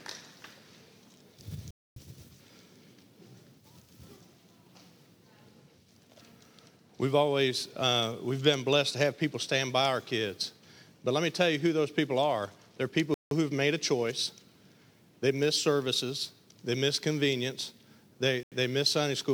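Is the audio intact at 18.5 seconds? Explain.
No. A block of digital silence runs from 18.43 to 18.52 s, an 85 ms hole, which fits a 4096-sample buffer left unfilled. The sound drops to silence and returns with no fade, unlike a smoothed or concealed dropout.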